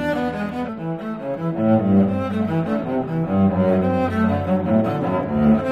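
At 0.68 s there is a single short burst of damaged data in a compressed stream. A stretch of the encoded bitstream arrived corrupted, so the decoder could not read those frames properly, lost its place and had to find the next valid frame header before normal playback resumed. It is heard as a brief chirp, squawk, click or short hole.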